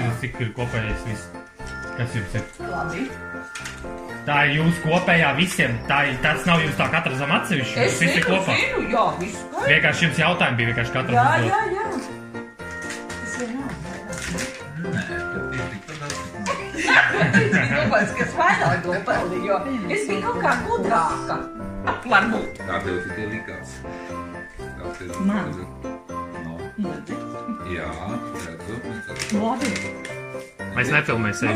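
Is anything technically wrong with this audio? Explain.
Yes. From 2.84 to 6.84 s, the adaptive stream switches to a lower bitrate for four seconds. The connection apparently slowed, so the player swapped to a leaner encode, which fits a step from roughly 64 kbit/s Opus down to around 24 kbit/s. Codec artefacts become audible. On a spectrogram the upper band is abruptly cut back or smeared in that window, while the waveform runs on with no gap.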